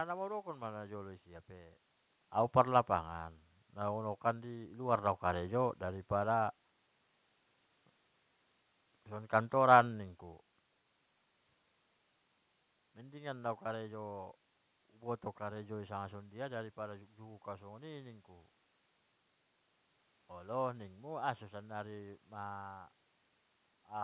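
No technical faults are audible.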